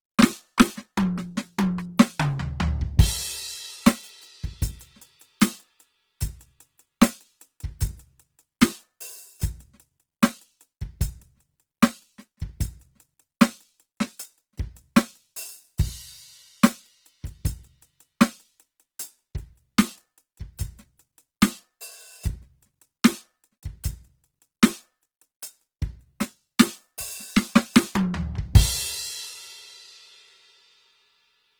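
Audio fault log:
throughout, Opus compression: the music sounds plainly grainy and rough, with tones thickened into noise instead of swirly holes, yet the top end still reaches 20.2 kHz. That's likely Opus in music mode, starved at around 16 kbps and filling bands with noise.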